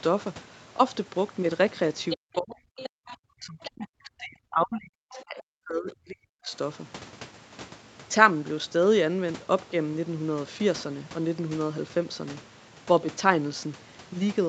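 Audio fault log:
2.1 to 5.23 s, other side's voice leaking through: four short scraps of a second voice, at 2.1 to 2.17, 2.77 to 2.89, 3.65 to 3.7 and 5.12 to 5.23 s, sitting roughly 10 to 20 dB under the talker. Likely loudspeaker echo the canceller didn't fully remove from the mic.
2.15 to 6.52 s, speech suppressed in double talk: the talker keeps ducking for about four seconds of this stretch, at worst dropping around 40 dB, almost gone. Likely the echo canceller couldn't tell the talker from the far-end echo and turned both down.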